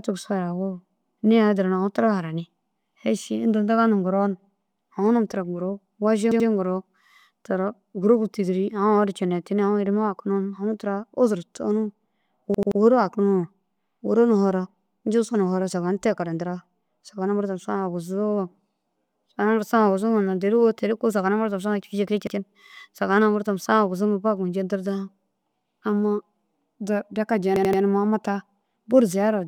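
Repeated buffers interrupt the speech at 6.32 to 6.49 s, 12.54 to 12.80 s, 22.27 to 22.36 s and 27.56 to 27.82 s. Each time, fresh audio failed to reach the device in time, so it replayed the last chunk of about 85 ms, which fits a 4096-sample buffer. That chunk sounds twice extra at 6.32 s, three times at 12.54 s and 27.56 s, and once at 22.27 s, heard as a stutter with a hard join at each repeat. No audio seems to go missing.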